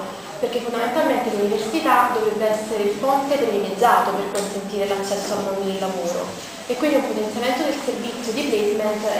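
Nothing stood out on listening; no faults could be heard at any point in the clip.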